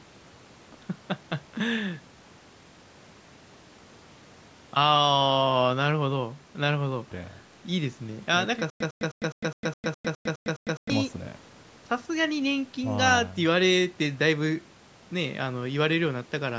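From 8.7 to 10.9 s the speech becomes a stutter with silent gaps. A single 103 ms fragment repeats ten times, each followed by 104 ms of digital silence, in a steady 207 ms cycle. A stalled stream likely replayed its last fragment at each retry. The silences set it apart from a seamless loop.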